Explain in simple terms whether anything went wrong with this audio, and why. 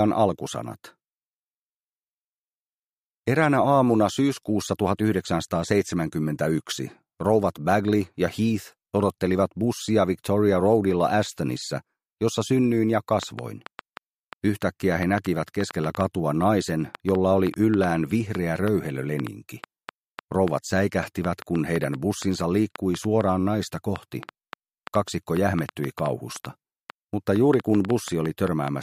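From 13.23 s to 28.69 s, a train of clicks ticks about four times a second, unevenly. Unlike random crackle, every click sounds alike, likely from interference.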